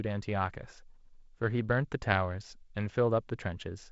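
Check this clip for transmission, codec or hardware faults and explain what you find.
Nothing faulty turns up in this speech: it carries only ordinary G.722 wideband telephone coding, with content ending near 7.7 kHz and the light coding noise expected at 48 kbit/s.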